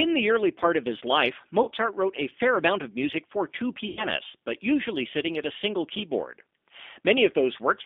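Speech in which every sound comes through narrow, slightly rough and synthetic, confined to roughly 200 Hz to 3.6 kHz. This is the G.729 codec at 8 kbit/s, rebuilding the voice from a vocal tract filter, a pitch predictor and a few pulses per frame, which leaves plainly audible coding damage throughout. At 1.63 to 1.70 s, between "part of his life" and "wrote a fair amount", and again at 3.89 to 4.06 s, between "of music for two" and "but usually sitting at", the sound smears into a fading buzzy tone or coloured noise and stays weak or distorted just afterwards. This is VoIP packet loss concealed by the speech codec. About 40 ms and then 80 ms of audio went missing, and the decoder filled each gap by extending its last pitch and filter at falling gain, so recovery lags once real frames return.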